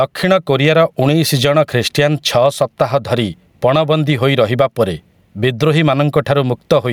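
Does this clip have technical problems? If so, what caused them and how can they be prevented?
Yes. The speech shows gain pumping throughout: the gain is pulled down each time the speech gets loud, a swing of around 10 dB. Loud and quiet passages sit unnaturally close in level, giving a squashed sound. The likely cause is input gain set far too high, with a fast limiter or compressor clamping down on each peak. Setting a lower input gain and gentler dynamics processing prevents it.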